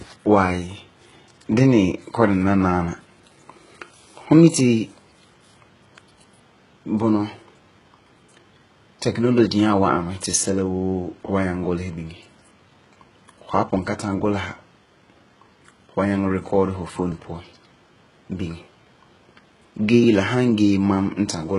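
Speech with heavy codec damage from start to finish: the treble sounds rebuilt rather than natural, s sounds turn gritty, metallic or lispy, and nothing is present above about 11.1 kHz. The likely cause is HE-AAC compression at a very low bitrate, consistent with around 12 kbps. Only the lower spectrum is coded, and the upper bands are synthesized by copying lower content upward under a coarse envelope, so harmonics fail to line up across the crossover.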